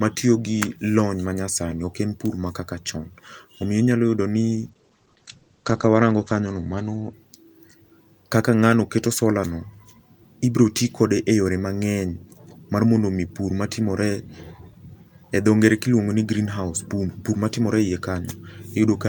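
From 4.56 to 7.71 s the speech shows a call bitrate drop: the encoder was starved of bits after the bandwidth estimate fell, consistent with roughly 48 down to 12 kbps. Top end narrows from 20 kHz to 8 kHz, and the speech turns muffled and watery, worst for about 1.6 s.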